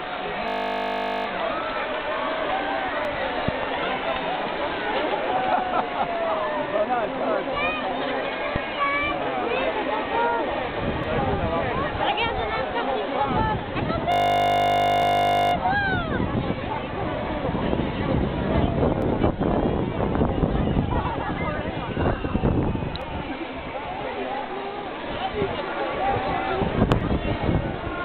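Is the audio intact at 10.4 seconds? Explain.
Yes, the audio is intact at 10.4 seconds, with no dropout, click, distortion or other fault at that moment.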